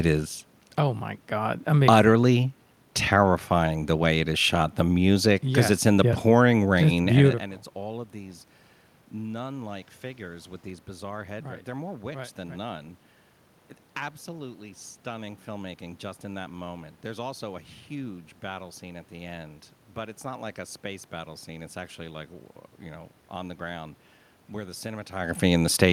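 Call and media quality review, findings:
No system faults found; audible background is room noise in the recording, and level changes around 7.5 s and 25 s are the talker moving relative to the mic.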